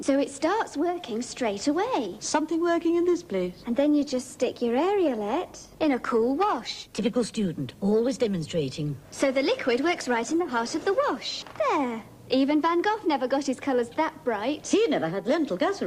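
At 3.41 s the quality drops abruptly with no gap: the adaptive stream switched to a lower bitrate, likely because the connection slowed. Codec artefacts rise, consistent with Opus falling from about 64 to 24 kbit/s, then recovers at 11.41 s. Steady codec damage would persist throughout.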